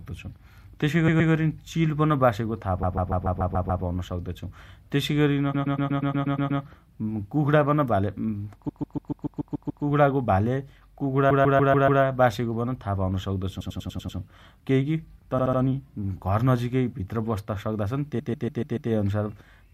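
Repeated frames stutter the speech eight times: 1.07–1.31 s (just before "चिल बासेको"), 2.82–3.83 s (before "सक्तो छु"), 5.53–6.61 s, 8.68–9.83 s, 11.29–12.01 s, 13.60–14.17 s, 15.37–15.59 s and 18.18–18.90 s. Each time a short block of 72 to 144 ms loops between two and nine extra times. Each stutter adds 0.2 to 1.15 s to the audio.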